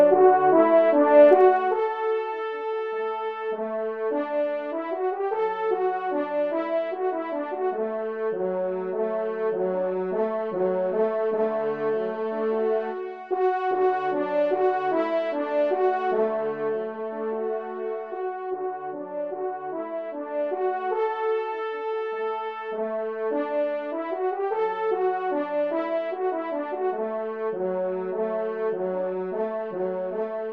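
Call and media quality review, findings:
Zipper noise, 1.27–1.81 s: ticking as level drops about 15 dB in 1 dB steps, roughly 30 per second. Unsmoothed gain stage. Waveform shows staircase envelope; spectrogram shows faint vertical broadband clicks.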